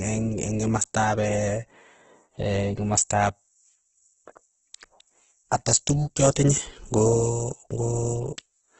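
Opus compression runs throughout: the speech is rough and grainy, with nothing above 8.2 kHz, likely from a starved music-mode encoder near 12 kbps.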